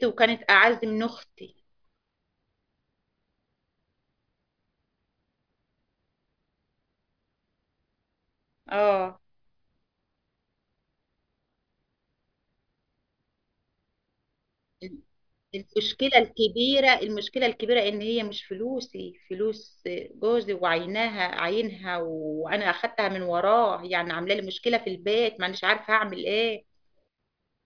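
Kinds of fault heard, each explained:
No technical faults detected in this speech recording.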